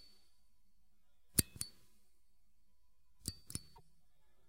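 At 3.75 s the sound skips forward, and a glitch fills the gap until 3.81 s. That is about two 26.1 ms MP3 frames. A broken MP3 bit reservoir is the likely cause: frames were dropped, so the next frames read borrowed data from the wrong place.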